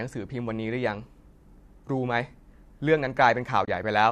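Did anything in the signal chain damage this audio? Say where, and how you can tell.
Yes. AAC frame loss with muting at 3.65 to 3.68 s, network stage: a soft-edged 30 ms hole, likely three lost frames zeroed by the decoder, with overlapping windows fading it out and in.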